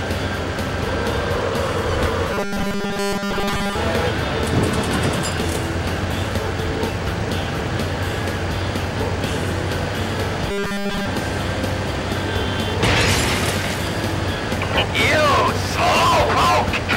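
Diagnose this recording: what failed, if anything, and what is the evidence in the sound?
A driver or buffer underrun likely left gaps that were filled by replaying the last 5 ms of audio. The result is a robotic sound from repeated short buffers, a rigid metallic 200 Hz buzz, across most of 2.34 to 3.75 s and all of 10.51 to 11.06 s.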